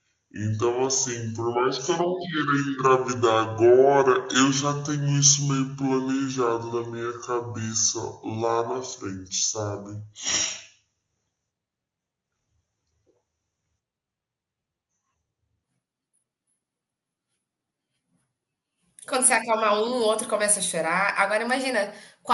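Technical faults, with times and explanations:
0.0–15.64 s, section at the wrong speed: this stretch was likely played against the wrong clock, running at 0.606 times its recorded rate, so the sampling and playback timing no longer match. Because speed and pitch are tied together, the speech comes out slowed and dragged, with the voice dropped by about ten semitones into a deep, heavy register, before the normal rate returns once this section ends.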